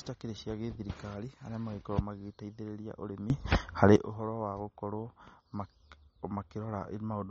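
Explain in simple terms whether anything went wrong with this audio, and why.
The speech sounds dull and watery from start to finish. The crisp top end is missing, with nothing above 8.4 kHz, so s sounds lose their sparkle and the sound has a swirling, underwater quality. This is MP3 compression, most likely at a low quality setting. To save space, the encoder threw away the highest frequencies and dropped quieter details that then flicker in and out.

From 3.3 to 3.96 seconds, the audio suddenly gets much louder, and the background hiss jumps up along with the voice. It then drops back just as abruptly. This is a sudden gain jump. The volume was changed instantly instead of being eased in and out, likely by a level setting that switched on without a smooth fade. Because everything rises together, the jump sounds like a shove rather than someone speaking louder.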